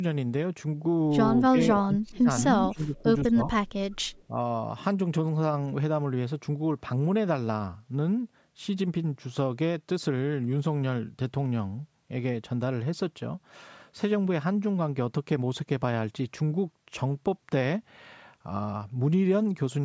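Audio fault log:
1.79–4.36 s, speech suppressed in double talk: the speech dips at 1.79–2.28, 2.68–3.05, 3.27–3.49 and 4.29–4.36 s, by about 25, 15, 25 and 5 dB at its deepest. It likely comes from an echo canceller that could not separate its own talker from loudspeaker echo while both sides spoke, so it turned both down.
2.38–2.42 s, echo leak: a short, faint copy of the speech returns 169 ms late, about 10 dB below it. The likely cause is a loudspeaker whose sound reached the microphone on that same side and slipped past an echo canceller that did not fully remove it.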